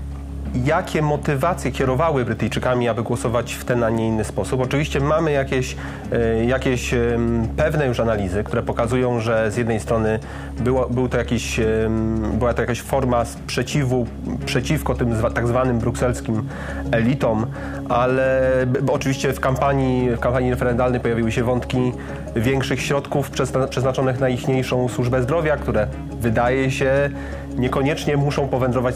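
No technical faults can be heard anywhere in this audio.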